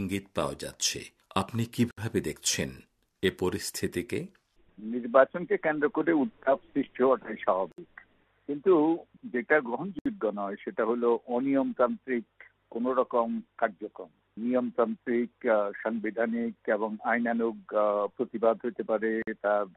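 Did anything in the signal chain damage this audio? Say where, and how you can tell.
Yes. Gaps at joins of encoded pieces, from the codec stage. Silences of 52 to 67 ms open at 1.91, 7.72, 9.99 and 19.22 s, with smeared edges. The sound resumes where it stopped. Separately encoded pieces were joined untrimmed, keeping encoder delay and padding.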